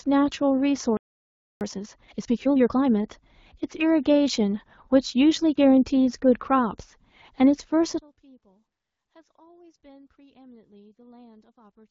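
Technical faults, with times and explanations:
0.97–1.61 s, playback stall: the speech cuts out mid-flow for about 640 ms of silence, then resumes where it left off. The likely cause is the player running dry of buffered data or its output thread being blocked until it recovered.
1.61–2.87 s, time-compressed catch-up: straight after the gap the speech runs hurried, about 1.5 times normal speed, yet at its normal pitch, because small slices are cut out and cross-faded to shrink the backlog.
5.54 s, lost AMR speech frames: a single 20 ms frame is missing, heard as a brief dip or warble. The AMR-WB decoder fills the gap by reusing the last good pitch and vocal tract settings at reduced gain, then speech carries on.
7.99 s to the end, one channel inverted: the level falls by about 32 dB and the centred speech nearly vanishes, leaving a faint residue. The likely cause is one stereo channel with reversed polarity, so the shared content cancels when the channels are summed to mono.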